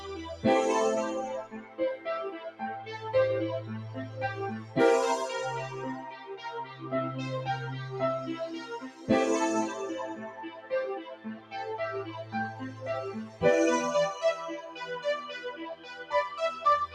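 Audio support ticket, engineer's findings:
Noise suppressor applied to music or sounds, throughout: speech-tuned suppression left on treats steady tones and tails as noise. Level swings by around 10 dB, so sustains pump and thin.

Sound cut by the noise suppressor at 1.44–2.89, 6.08–6.86, 8.62–9.09, 10.16–11.54, 12.24–12.82, 13.26–13.42, 14.61–14.81 and 15.74–16.12 s: held or decaying material pulled down by about 7 to 13 dB, with decays cut short.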